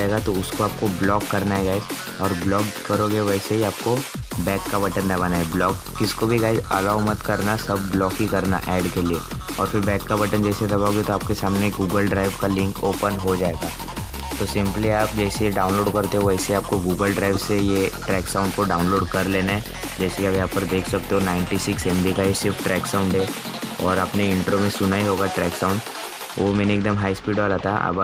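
No technical faults can be heard anywhere in this audio. There is no point in the clip that calls for a timestamp or a closer listen.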